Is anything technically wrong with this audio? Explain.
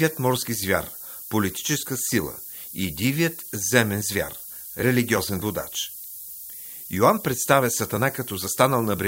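Yes. Throughout the speech a steady, thin hiss climbs sharply toward the top of the band, sitting only about 10 dB below the voice. This is low bit depth with noise shaping: the signal is reduced to 7 bits, and the rounding error is pushed up into the highest frequencies.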